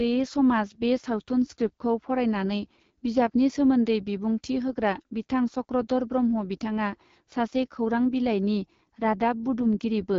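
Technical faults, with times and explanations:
Throughout, AMR wideband (HD Voice) codec damage: speech is rough and raspy, suiting an 8.85 kbit/s rate, and cuts off above 7.2 kHz.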